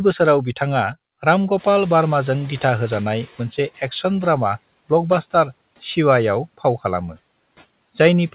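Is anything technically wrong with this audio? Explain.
Yes. From 1.57 to 3.69 s, the noise suppressor is catching up. Room noise jumps at about 1.5 s and passes through with less reduction at first. Over about 2.1 s, the suppressor adapts and the noise sinks by about 12 dB.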